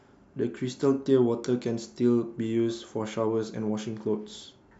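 No faults can be heard anywhere in this speech recording.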